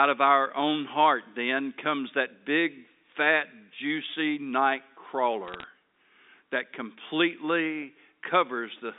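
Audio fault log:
5.47–5.63 s, bit errors on a digital phone line: a brief burst of sharp ticks and crackle over G.711 speech, limited to 250 Hz–3.7 kHz, as flipped bits, roughly one in five hundred, corrupt single samples. The speech underneath stays intact, which rules out dropouts or packet loss.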